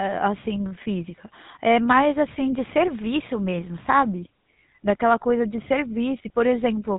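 Speech with a buzzy, gravelly roughness throughout and nothing above 3.9 kHz: GSM full-rate codec damage, plainly audible, consistent with a 13 kbps pulse-excited vocal-tract model.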